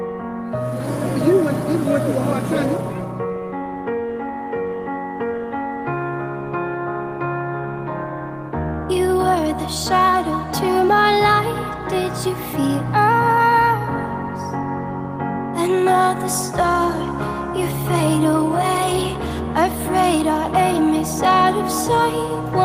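No technical faults are audible.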